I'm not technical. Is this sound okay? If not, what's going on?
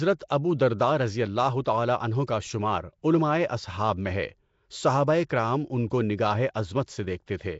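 No. Nellymoser compression affects the whole clip, likely from the old Flash microphone codec. It chops the speech into short blocks and gives each only a small, fixed budget of detail. Weak frequency bands within the sound get nothing and are filled in with noise. That gives the speech a rough, hissy haze and a muffled, underwater feel, and there is nothing at all above 7.7 kHz, so the crisp top end is missing.

Pre-echo occurs at 1.64 s, 2.27 s, 5.29 s, 5.90 s and 6.54 s. The first comes just after "ابو درداء رضی اللہ" and before "تعالیٰ عنہ کا", the second just after "رضی اللہ تعالیٰ عنہ", and the third just before "کرام ان". Because the compression spreads its noise across a whole block, a sudden sharp sound drags a short hiss into the moment just before it, about 11 to 13 ms early, which softens the attack.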